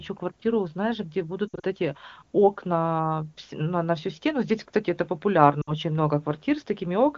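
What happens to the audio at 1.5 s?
Around 1.48 to 1.65 s the speech breaks up from lost AMR speech frames. Over those 160 ms, about 120 ms of frames failed to arrive intact, with the longest unbroken gap near 60 ms. The wideband decoder fills each gap by repeating the last good pitch and vocal tract settings at falling gain, so the sound warbles, smears and dips rapidly. On a waveform the envelope sags in short notches. A spectrogram shows held, flattened harmonics fading before normal detail returns.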